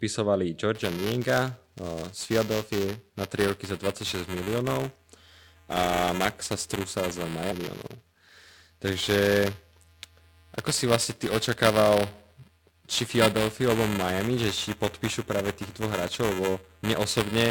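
From 0.75 s to the end, the speech carries buffer tearing. The writing process and the playback hardware have drifted so they cross inside every period, and a small slice of each block, a few milliseconds stale, replays with hard joins on both sides. The result is a steady robotic buzz at 375 Hz, which fits a 128-sample buffer, present only while sound plays. A spectrogram shows harmonic lines at 375 Hz spacing over the speech, and the waveform shows regular discontinuities.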